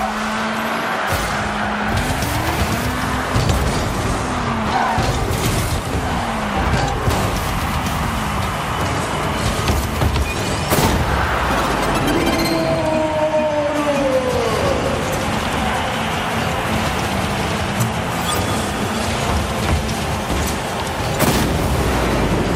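No technical faults can be heard anywhere in the recording, and the signal stays intact throughout.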